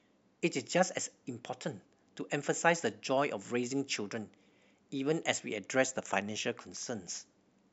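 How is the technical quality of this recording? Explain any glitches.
The recording has one glitch, a brief case of chunks out of order in the speech at 4.50 to 4.52 s. A 10 ms block of audio arrived one chunk late, so it plays after the block that should follow it. No audio is missing, but the sequence is swapped, leaving three hard joins within about 20 ms. It sounds like a tiny jumbled stutter.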